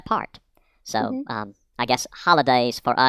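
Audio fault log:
Throughout: wrong sample rate. The speech runs about 1.45 times fast and sits about 6.5 semitones high, which fits audio recorded near 22 kHz played at 32 kHz without conversion. On a spectrogram, harmonics and formants are stretched upward; the waveform's syllables are squeezed closer together.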